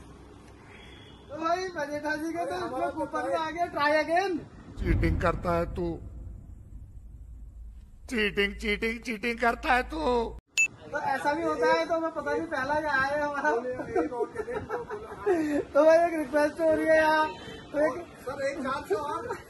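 No technical fault can be heard anywhere in this audio. Nothing in it calls for a timestamp or a closer listen.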